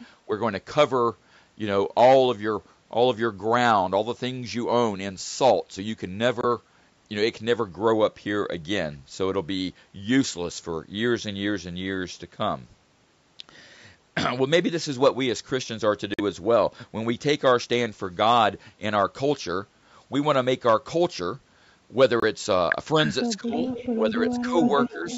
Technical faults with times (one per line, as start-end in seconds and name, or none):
6.41-6.45 Bluetooth dropout
16.14-16.21 Bluetooth dropout
22.20-22.24 Bluetooth dropout
23.26-23.57 speech suppressed in double talk
23.57-23.99 echo leak
23.98-25.06 speech suppressed in double talk
24.58-25.17 echo leak